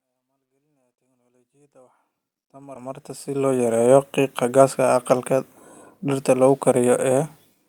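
At 2.75 s there is a skip ahead. About 0.4 s of speech is simply gone. Audio that was already waiting played straight on, with no filler and no gap. The two sides meet almost directly, so the speech jumps abruptly.

From 2.85 to 5.13 s comes a jitter buffer speed-up. The buffer was holding more delay than it aims for. So the receiver trimmed short pitch-period pieces, many times over, removing roughly 0.2 s. Speech runs at about 107% speed with unchanged pitch. It sounds hurried. This overlaps the smooth fade-in that rises from the start to 3.79 s.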